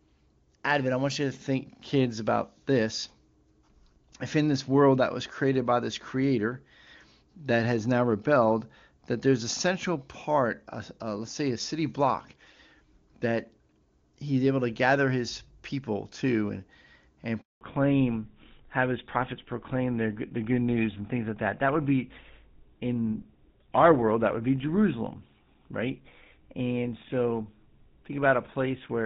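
Speech from a phone call, clear at first and consistent with high-rate HD Voice. At 17.41 s a handover gap silences the sound for 200 ms. It happens once, with no stutter or garbling, so it points to a network switch rather than scattered packet loss. From 17.61 s to the end, a fallback to narrowband strips everything above 4 kHz and leaves the speech duller and rougher. The cut is sharp and permanent rather than a brief dip, which fits a move onto the older GSM full-rate codec.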